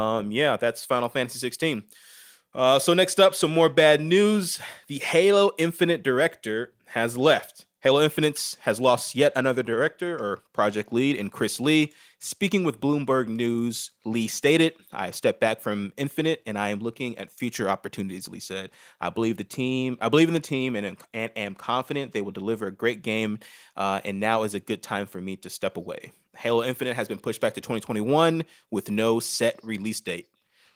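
No technical fault can be heard in this speech; it carries full-band Opus voice coding in hybrid mode, consistent with about 24 kbps, with only light coding damage.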